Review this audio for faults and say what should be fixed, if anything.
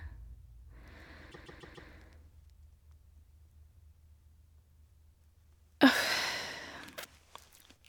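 Repeated frames from 1.31 to 1.89 s: a 144 ms block of speech plays four extra times, adding 576 ms and stuttering. Unlike an echo, each repeat is identical in level rather than decaying, which fits a run of about six compressed frames being re-sent. To prevent it, de-duplicate frames by sequence number or timestamp before decoding.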